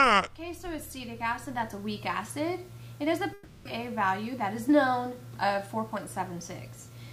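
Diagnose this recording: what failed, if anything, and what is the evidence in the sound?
Network stage: a likely long network dropout from 3.33 to 3.67 s. The receiver bridged the gap with a fading buzz, and 320 ms of audio never returns.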